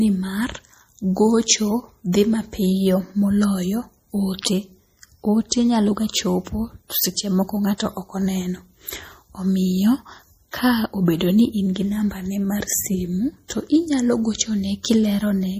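Throughout, the speech sounds watery and swirly, with metallic chirps on s sounds and nothing above 15.4 kHz. This is MP3 compression, likely at a low bitrate near 40 kbps, where the encoder cuts the treble and lets weak frequency lines drop in and out between frames.

A short hiss comes in ahead of sharp attacks from 5.49 to 5.52 s, just before "nyalo ga", from 7.78 to 7.80 s, at 13.48 s after "namba ne mar simu", and at 14.83 s. This is pre-echo: coding noise meant for each loud onset spreads across its transform block and fills the quiet 16 to 24 ms before it.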